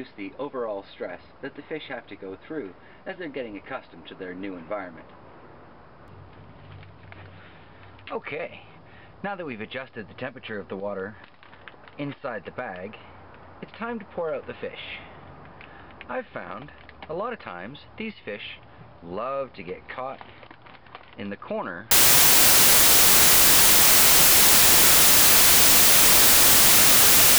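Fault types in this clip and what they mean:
Samples built from the wrong bytes: from 21.91 s to the end, each sample's bytes are combined in the wrong order or alignment, so the noisy low bits dominate and the audio becomes loud, harsh broadband noise; a spectrogram fills broadly across frequencies, and the waveform turns into dense hash.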